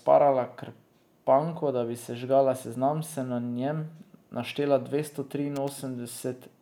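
A worn or dirty contact in the signal path begins making and breaking at 5.56 s, just after "naštela dvesto", and keeps doing so until about 5.69 s. This is loose connector crackle: for roughly 0.13 s the speech is rapidly chopped on and off, and each interruption of any DC on the line adds pops. The result is a short, irregular burst of scratchy crackle laid over the speech before the connection settles.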